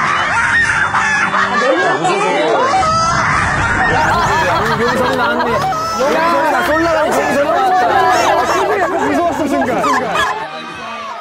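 For the first 4.0 s the audio plays as an adaptive stream starting at a low bitrate. The treble is thin and swirly, and a spectrogram shows nothing above 11 kHz, which fits a low-bitrate parametric codec. At 4.0 s the full band fills in abruptly, without a gap, as the player steps up to a better stream. From 7.89 s to 10.43 s a doubled audio track appears: a dry, full-band copy trails about a third of a second behind, roughly 5 dB quieter, likely from a second, slower capture path. On the waveform each envelope shape repeats just afterward at lower height, and the copy switches on and off with hard edges.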